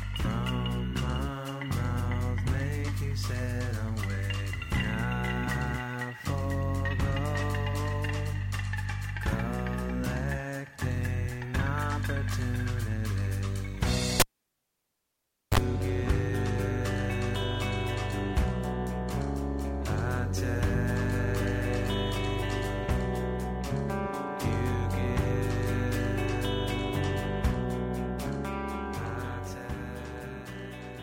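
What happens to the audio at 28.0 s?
Nothing goes wrong at 28.0 s; the audio plays through that moment intact, with no dropout, click or distortion.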